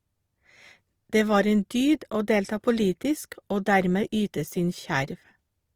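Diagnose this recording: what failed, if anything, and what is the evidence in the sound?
Opus compression throughout, a codec-stage fault. The speech stays fullband with few spectral holes and little swirl, yet its tones turn grainy, rough and noisy. That fits Opus CELT mode near 24 kbps, likely starved of bits and filling bands with folded or noise content.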